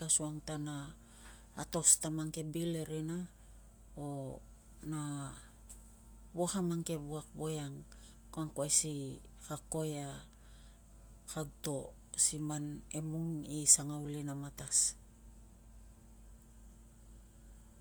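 This is a speech clip with plainly audible codec damage from start to finish. The sound has the texture of Bluetooth LC3 compression, the likely cause. LC3 is the LE Audio transform codec. It codes audio in short blocks, here consistent with 10 ms frames. When bits run short it drops upper-spectrum detail and substitutes shaped noise. That leaves a grainy, breathy edge on the speech. The damage level fits roughly 48 kbps. Nothing is heard above about 20.1 kHz.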